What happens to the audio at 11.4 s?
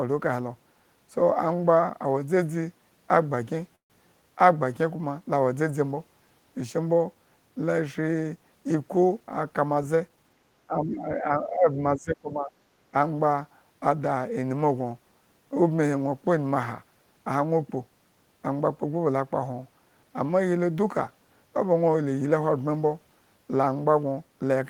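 At 11.4 s the speech sits inside a stretch of speech suppressed in double talk, running from 10.67 to 12.52 s. The level dips by roughly 15 dB at its deepest and the voice thins and breaks up for around a second and a half in total. The likely cause is an echo canceller that, with both sides talking at once, could not tell this talker from the loudspeaker echo and attenuated both. On a waveform the envelope sags and fragments, and a spectrogram shows dimmed bands with the upper frequencies thinning.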